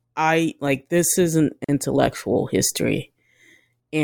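At 1.64 to 1.69 s there's a gap at a join of encoded pieces: about 42 ms of silence where separately encoded chunks met untrimmed, then the speech simply resumes.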